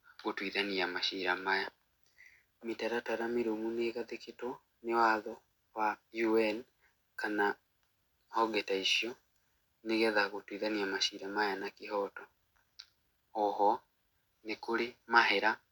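No technical faults are audible.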